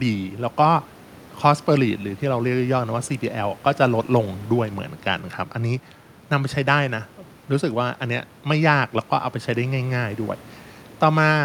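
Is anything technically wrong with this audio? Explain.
No, nothing here is technically wrong; the faint room noise about 26 dB below the speech is just part of where the microphone was, not a problem with the system.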